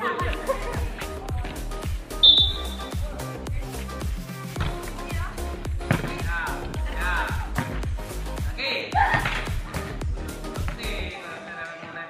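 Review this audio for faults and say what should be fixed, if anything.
Two short dropouts show up as lost LE Audio frames, at about 2.53 to 2.56 s (30 ms) and 6.69 to 6.73 s (40 ms). The LC3 decoder covers each gap by replaying the last spectrum with scrambled phase, so any tonal content briefly turns into a noisy smear. The gap lengths point to three and four consecutive 10 ms frames going missing. To prevent it, fix the radio link by improving range or reducing interference, or add retransmission headroom so frames arrive intact.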